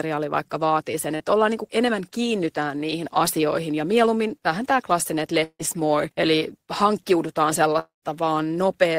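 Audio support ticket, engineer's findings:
Short concealed packet loss, 1.15–1.23 s, right after "vaikka vaatii sen": quick smear before "ollaan niin kuin enemmän". Receiver-side concealment patched about 40 ms of missing speech by stretching the last sound, then crossfaded back.

Long network dropout, 5.44–5.62 s, after "vähän tämä klassinen että": fading buzz or hiss, then about 60 ms of silence, back at "more eli hankkiudutaan". Roughly 160 ms of speech gone, likely a network dropout with the jitter buffer running dry.

Same thing at 7.79–8.05 s, after "more eli hankkiudutaan": concealment tail fades into about 140 ms of silence. Around 240 ms lost, likely another network dropout.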